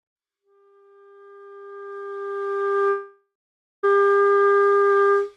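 From 2.89 s to 3.85 s there is a break that is likely a long network dropout. The sound smears into a fading buzz, then falls silent for about half a second, and resumes with about 0.94 s missing, far longer than a brief packet-loss glitch.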